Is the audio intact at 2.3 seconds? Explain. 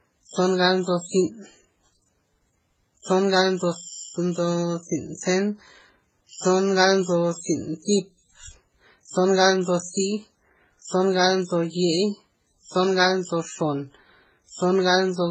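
No. At 2.3 seconds, as throughout the speech, there is what sounds like transcoding between lossy codecs. Nothing remains above 8.2 kHz, and the sound is smeared and watery, with swirling, warbling artefacts stacked on one another. This likely comes from a chain of low-bitrate encoders, each spending bits on the previous one's damage and adding its own. On a spectrogram, energy stops at a flat ceiling near 8.2 kHz, with blotchy, patchy harmonics below it.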